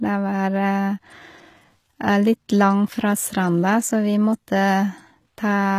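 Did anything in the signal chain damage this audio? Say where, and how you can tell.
Yes, at the codec stage, across the whole clip. The treble stays bright but sounds synthetic: s sounds come out gritty and lispy, with a metallic sheen, and there is nothing above about 14.9 kHz. That pattern is likely HE-AAC compression, at a low rate fitting roughly 20 kbps, rebuilding the upper band by copying lower bands upward. A plain low-pass or band-limited converter would sound dull instead, and MP3 would add swirly artefacts rather than this bright, misaligned treble.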